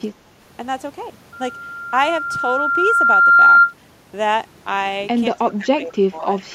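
Right at the start, from 0.11 to 0.21 s, the speech dips sharply by roughly 15 dB, and from 5.39 s to the end it sinks again, by around 20 dB, for about a second. Both dips fit speech suppressed in double talk, likely from an echo canceller that heard both ends talking at once, could not tell this talker from the loudspeaker echo, and pulled the whole signal down.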